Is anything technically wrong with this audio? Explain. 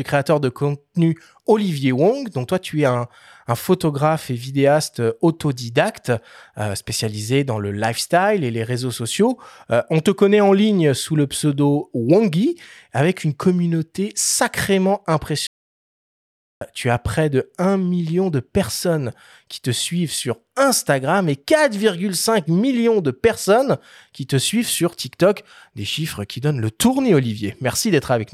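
Yes. At 15.47 s a playback stall cuts the speech off right after "avec une communauté sacrément", and the output stays silent for about 1.14 s until 16.61 s, when it resumes with "tu as près de". The likely cause is the player running short of data or its thread being blocked, so nothing reached the output until it caught up. On a waveform this appears as a flat line with abrupt edges, and on a spectrogram as a blank vertical band across all frequencies.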